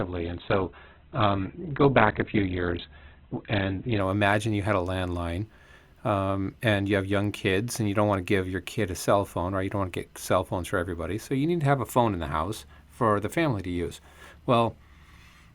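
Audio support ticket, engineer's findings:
Muffled, artefact-heavy speech, nothing above 4.4 kHz, 0.0–4.0 s; sudden gapless upgrade before "know imagine you had". Adaptive stream starting at a low bitrate, switched up after measuring bandwidth.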